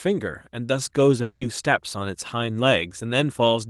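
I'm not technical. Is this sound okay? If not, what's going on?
No. From 1.22 to 1.42 s the speech turns into a short, fading buzz or hiss, likely a long network dropout: for about 0.19 s no audio reached the receiving end, so it stretched out the last sound to cover the gap, and that slice of speech is lost for good.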